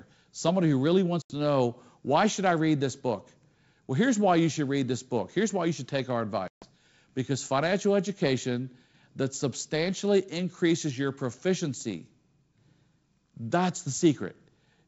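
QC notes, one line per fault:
1.22–1.32 s and 6.48–6.68 s, packet loss on an ADPCM call: abrupt silent gaps of 80 and 140 ms, then briefly, slightly distorted sound while the decoder's predictor and step size resynchronise.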